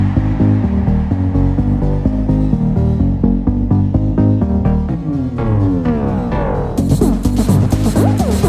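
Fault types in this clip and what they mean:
Nothing wrong turns up here; there's no fault to list anywhere in this audio.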